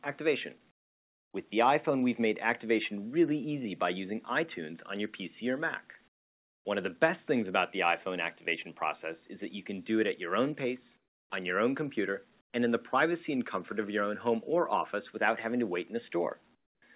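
At 0.71 to 1.34 s, 6.08 to 6.65 s, 10.97 to 11.3 s, 12.41 to 12.53 s and 16.55 to 16.82 s, the quiet background between sounds gives way to comfort noise in place of the background. The likely cause is discontinuous transmission: the sender stops sending during pauses and the receiver synthesises a smooth noise bed instead. Each gap turns flat and featureless, dropping by about 22, 29, 18, 21 and 19 dB respectively. On a spectrogram these stretches show as uniform, texture-less grey bands that end abruptly when sound resumes, all capped at 4 kHz, which fits a G.711 call path. On the waveform they appear as sudden, even, low-level steps.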